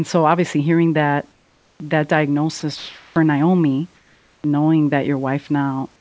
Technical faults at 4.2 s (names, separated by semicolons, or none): comfort noise in place of the background